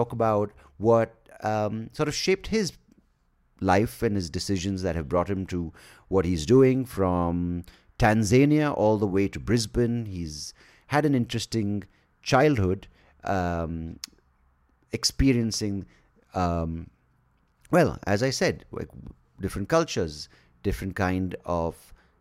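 No technical faults are audible anywhere in this speech.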